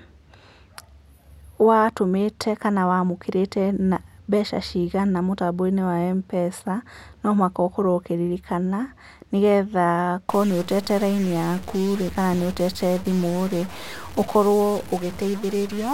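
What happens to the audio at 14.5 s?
At 14.5 s the speech is inside a stretch of harsh, buzzy distortion running from 10.29 s to the end of the clip, most likely a stuck bit. Roughly half the samples are shifted by a fixed step around -35 dBFS in a pattern that follows the waveform, so even quiet gaps fill with a gritty noise floor. Clipping only flattens peaks and leaves pauses clean, which sets this apart.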